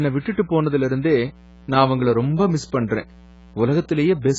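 From start to finish, a steady, raspy mains buzz sits under the speech at roughly 25 dB below it. Sharp current spikes leaking in at every half-cycle of a 60 Hz supply produce a dense series of harmonics rather than a pure hum. On a spectrogram this shows as evenly spaced horizontal lines at multiples of 60 Hz, stacked from the bass up into the kilohertz range. On the waveform the gaps between phrases never fall flat but carry a fine, periodic ripple.

Also throughout, the speech sounds dull, smeared and warbly, with fizzy, unstable sibilants, likely from heavy AAC-LC compression at a very low bitrate, around 16 kbps. At that rate the encoder discards whatever its hearing model judges least important. It removes the top of the spectrum entirely and coarsely quantises the rest. A spectrogram shows a hard ceiling with nothing above 7.6 kHz, plus patchy holes and blotchy, noise-filled blocks between harmonics, most visible on sustained vowels and s sounds.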